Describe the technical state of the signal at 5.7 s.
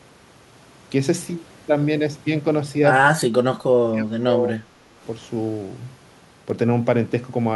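At 5.7 s the speech signal is intact, with no audible technical fault at that moment.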